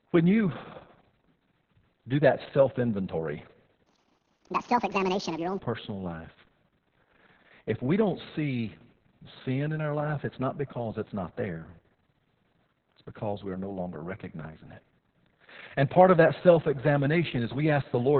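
Speech, carried throughout by heavily damaged Opus voice compression: nothing is left above 4 kHz, so the sound is narrowband, muffled and hoarse with a robotic edge. That points to SILK coding at a very low bitrate, around 6 kbps, with coarse excitation. From 3.86 to 5.59 s a section plays at the wrong speed, 1.64 times too fast, raising pitch by roughly ten semitones so the voice turns high and hurried. This is likely from that stretch being fitted to the wrong clock during editing or playback.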